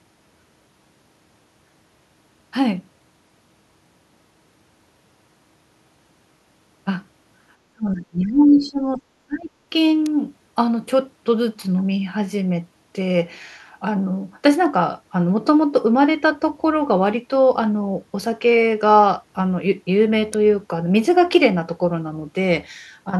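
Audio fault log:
7.72–9.52 s, speech suppressed in double talk: the voice sinks by roughly 25 dB for about one and a half seconds in total, likely because an echo canceller mistook overlapping talk for its own echo.
10.06 s and 20.34 s, electrical switching spike: each is a sharp snap added on top of the sound. This is likely a nearby switch or discharge arcing into the line. A digital glitch would instead interrupt or distort the signal itself.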